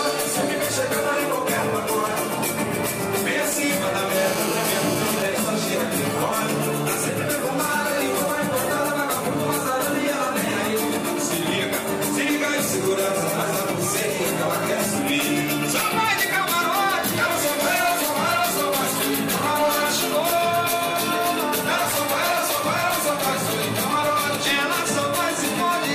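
From 4.15 to 5.23 s a GSM phone buzz cuts in: a nearby 2G handset in a call transmits bursts at about 217 Hz, which the audio circuit rectifies. The result is a hard, raspy 217 Hz buzz rich in harmonics, only about 5 dB below the signal.

From 5.26 to 6.70 s the buzz gives way to GSM signalling bursts, as the handset's user falls silent in the call and the phone sends only short groups of pulses. These are heard as even ticks with a longer 217 Hz buzz twice a second, far quieter, roughly 20 dB down.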